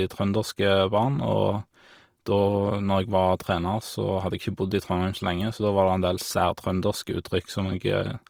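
Opus compression throughout: bit-starved bands are refilled with folded or noise content, making the speech grainy and rough, likely a music-mode encode near 24 kbps.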